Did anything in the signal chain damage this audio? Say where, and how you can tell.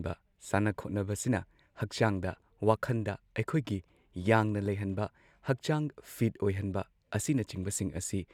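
No, nothing in the signal chain audibly damages this speech recording. No stage, from the wiring through to playback, leaves any mark on the sound.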